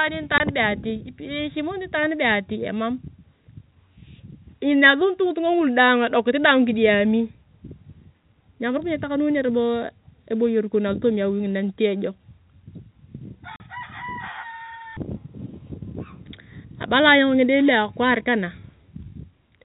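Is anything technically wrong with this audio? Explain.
Yes. There is packet loss filled with silence, in two places: a 20 ms gap from 0.38 to 0.40 s and a 40 ms gap from 13.56 to 13.60 s. When packets went missing, the receiver played zeros instead of concealing the loss, so the speech drops out abruptly with hard edges. The gap lengths suggest 20 ms packets, one lost and then two in a row. The speech is band-limited below 4 kHz, consistent with G.711 telephone coding.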